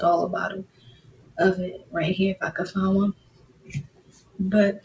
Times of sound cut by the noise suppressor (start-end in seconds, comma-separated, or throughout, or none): 0.64-1.38, 1.78-1.94, 3.13-4.39